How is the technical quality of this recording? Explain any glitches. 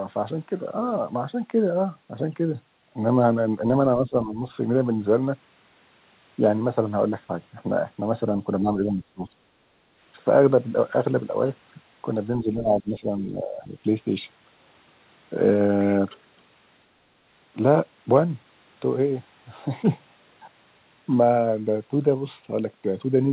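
The speech dips three times, in a pattern consistent with speech suppressed in double talk, over a narrowband call path that carries nothing above 4 kHz, which fits a G.711-style telephone codec. At 3.98–4.37 s, 8.62–9.35 s and 12.43–13.77 s, the echo canceller likely couldn't tell the talker apart from loudspeaker echo while both sides spoke, so it turned everything down. The voice sinks by roughly 10, 20 and 15 dB over parts of each stretch.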